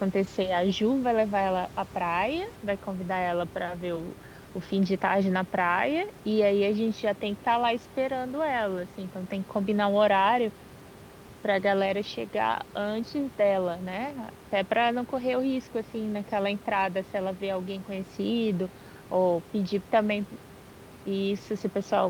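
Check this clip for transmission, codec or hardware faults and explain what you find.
No faults turned up in this clip.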